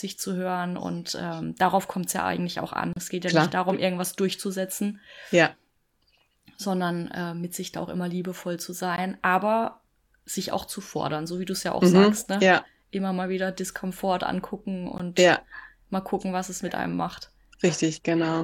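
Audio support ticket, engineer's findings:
Gap at a join of encoded pieces, in speech. Dropouts at 2.93 to 2.96 s (about 34 ms), 8.96 s and 14.98 s (16 ms each), every 6 s. Probable component: encoder/concatenation stage. Segments encoded separately, start delay and end padding left untrimmed.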